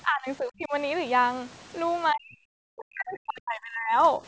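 An echo canceller likely mistook this speech for loudspeaker echo while both sides talked and turned it down. This speech suppressed in double talk dips by around 20 dB at 0.04–0.73 s, drops by some 40 dB into near cutouts across 2.12–3.96 s, and sags faintly at 4.18–4.22 s.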